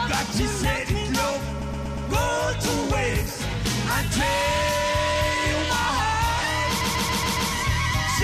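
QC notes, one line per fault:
1.62 to 2.09 s, repeated frames: a 129 ms chunk of sound plays four extra times, a quick stutter. That fits a block of about six compressed frames being written again, adding 476 ms.
6.80 to 7.50 s, repeated frames: same stutter again, with a 139 ms block replayed five extra times. That's roughly six frames looping, stretching the audio by about 0.7 s.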